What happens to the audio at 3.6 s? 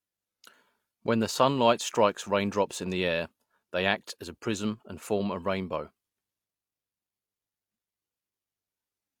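Nothing goes wrong at 3.6 s; the speech carries on intact through that moment with no dropout, click or distortion.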